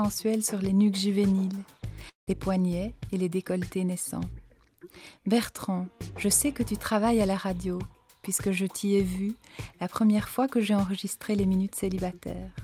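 From 2.09 to 2.29 s the sound smears into a fading buzz, then near silence, likely a long network dropout. About 180 ms is lost and concealed; 140 ms stays silent. A spectrogram shows decaying, smeared bands, then a blank gap.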